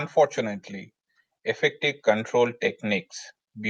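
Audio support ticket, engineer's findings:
No faults found on listening; no action required.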